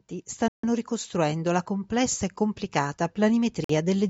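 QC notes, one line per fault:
0.38–4.05 s, automatic gain rising: speech and background swell together by about 7 dB as the gain control, reacting to a quiet input, gradually raises its gain.
0.48–0.65 s and 3.64–3.71 s, Bluetooth stall: sound cuts to silence for 152 ms, then 50 ms, before resuming, likely from interference delaying packets until the headphone buffer emptied.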